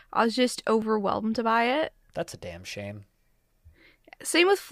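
From 0.82 s to 4.27 s, a regular click breaks into the speech about every 1.15 s, about four times in all. This is likely clock drift buffer slips: two clocks disagreeing by about 0.1 percent, so a few dozen samples get dropped or repeated at each slip.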